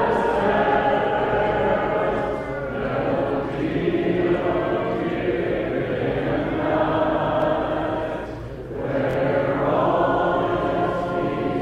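Dropped buffer (overrun) at 7.42 s and 8.40 s: each is a jump with the sound skipping ahead about 20 ms, likely from samples overwritten before being read. Bluetooth stutter from 9.11 to 9.17 s: lost packets made the receiver replay its last slice, giving a 46.4 ms buzzing stutter before the sound resumes further along.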